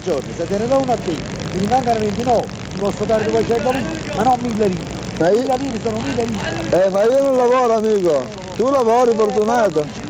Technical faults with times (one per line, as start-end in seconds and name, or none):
0.00-10.10 resampler restarted on every block